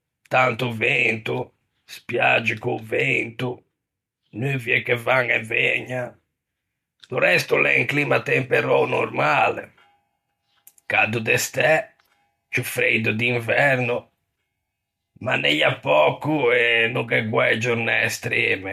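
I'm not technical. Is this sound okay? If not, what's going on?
Yes, no technical faults are audible anywhere in this speech recording.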